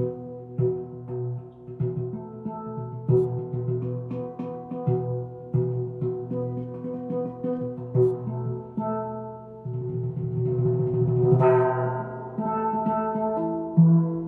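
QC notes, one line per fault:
No faults heard anywhere in this recording.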